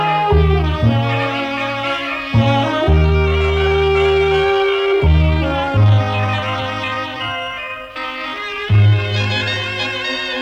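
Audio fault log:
2.80 to 9.68 s, time-stretched section: the pace abruptly drops to about 0.7 times normal speed while pitch holds steady. The slowed sound drags. Software likely stretched this stretch to fill a length by repeating short pieces.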